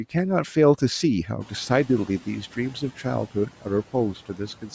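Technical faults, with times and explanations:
Throughout: noise suppressor artifacts. The suppressor treats the steady background as noise and pulls it down by about 11 dB in each band it flags, frame by frame. In the gaps the background sinks away, and under the speech it comes back up. The room noise rises by about 14 dB at around 1.5 s, and the suppressor keeps working against it. That noise stays about 20 dB below the speech, and the band stops near 8 kHz.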